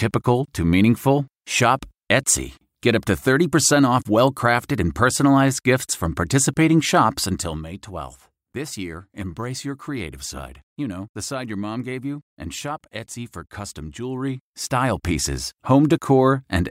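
Zipper noise runs from 14.04 to 15.08 s, while the level of the speech shifts by around 10 dB. Instead of gliding, the gain moves in discrete jumps, roughly two hundred a second, with nothing smoothing the transitions. Each jump leaves a tiny click, and the rapid train of them comes through as a fine buzzing or zipping texture laid over the speech until the level settles.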